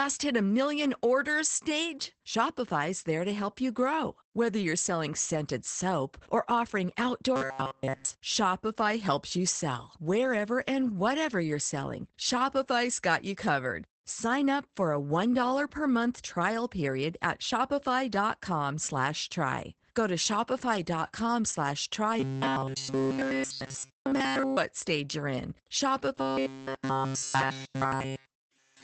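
The speech sounds muffled and slightly hoarse throughout, with nothing above 8.5 kHz. This is Opus voice compression in its SILK speech mode, which fits a low bitrate of around 12 kbps: the band is limited to wideband and the excitation is coded coarsely.

From 7.36 to 8.15 s, 22.20 to 24.57 s, and 26.21 s to the end, the speech becomes a rigid metallic buzz at 134 Hz. This is robotic sound from repeated short buffers. The likely cause is that new audio arrived too seldom, so a chunk of about 7.5 ms was looped in place of all the real signal.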